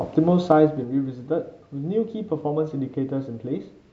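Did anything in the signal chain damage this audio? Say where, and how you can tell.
Yes. Between 0.44 and 0.92 s the level drops by roughly 10 dB in audible 3 dB jumps, about seven a second, and each jump lands as a little click. That ticking is zipper noise, and it points to the gain stage at the driver or buffer level. The new gain is applied in coarse steps, once per block, with no ramp, so the waveform kinks at every update.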